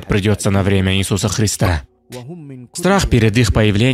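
At 1.65 to 1.68 s a short blip marks damaged data in the compressed stream: corrupted bytes make the decoder misread those frames and lose sync until it finds a valid header.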